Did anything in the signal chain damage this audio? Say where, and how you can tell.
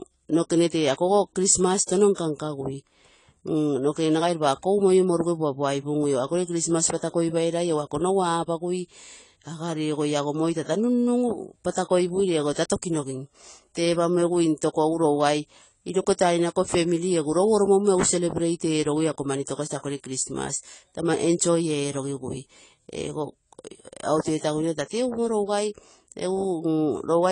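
Yes. The damage most likely comes from the codec stage, AAC compression, and runs through the whole speech clip. Nothing reaches above 10 kHz, and the codec damage is plainly audible throughout, which points to AAC-LC at a low bitrate of around 24 kbps. It differs from a simple low-pass filter or a lower sample rate because the speech isn't just duller. It also has the smeared, warbling texture that comes from quantising each frame's spectrum coarsely.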